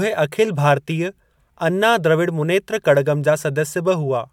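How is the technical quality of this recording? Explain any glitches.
The technical quality of this recording is sound, with no glitches to explain.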